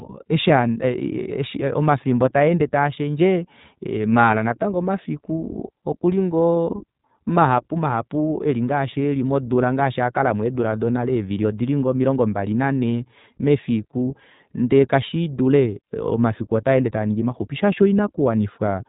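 Speech, with iLBC codec damage running through the whole clip. The sound is narrowband. Nothing passes above about 3.8 kHz, so sibilants lose their edge and the voice sounds boxed in. The coding artefacts are plainly audible: a slightly rough, synthetic grain sits on every syllable. Each short frame is coded on its own, without leaning on the one before, so the texture never fully smooths out. The pattern fits iLBC's 20 ms frame mode at 15.2 kbps.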